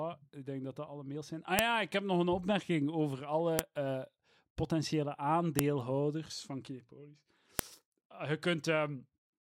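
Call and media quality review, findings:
File header played as audio. Sharp, loud clicks at 1.59, 3.59, 5.59 and 7.59 s, just before "ja ik heb nog" and after "eh potentiële". Spaced every 2.0 s. Chunk joiner leaves each WAV header in the stream, so its bytes play as samples.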